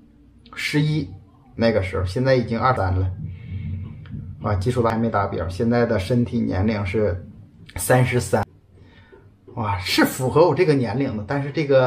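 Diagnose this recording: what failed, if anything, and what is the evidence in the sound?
The failure is at the codec stage: damaged data in a compressed stream. Three brief disruptions are audible, at 2.77 s, 4.90 s and 8.43 s, each a single short blip where the sound breaks character for an instant. At each point some bytes of the encoded stream were corrupted or lost, so the decoder could not parse the affected frame, lost sync and resynchronised on the next valid frame header before continuing.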